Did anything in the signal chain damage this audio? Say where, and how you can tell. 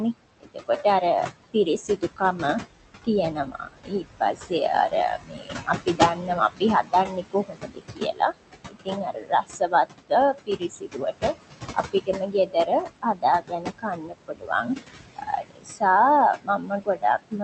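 Yes, the call-processing stage did. A noise suppressor pulls the steady room noise down by about 20 dB throughout, and with that noise only about 9 dB below the speech, the noise sinks between the words and rises under them. On a spectrogram, the pauses turn dark.

The same stage also produced speech cut by the noise suppressor, in spans at 0.13–4.52 s, 4.89–8.38 s, 8.69–14.69 s, 15.16–15.82 s and from 16.35 s to the end. In those spans, soft consonants and quiet endings sink by about 21–22 dB, totalling roughly several seconds. They show as sudden notches in the waveform envelope and faded high-frequency streaks on the spectrogram.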